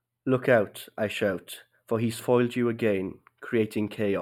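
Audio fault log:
throughout, channel delay (comb filtering): one side lags the other by just a handful of samples, so the mono sum cancels around 7 kHz and the speech sounds dull and phasey up top.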